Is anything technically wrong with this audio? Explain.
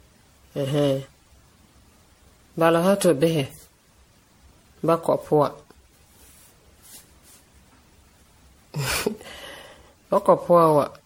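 Yes. Throughout the speech there is generation loss: the audio was likely encoded and decoded as MP3 about ten times, each pass requantising on a shifted frame grid. It sounds swirly, smeared and hollow, with blurred onsets and nothing above 16.5 kHz, fitting roughly 60 kbit/s.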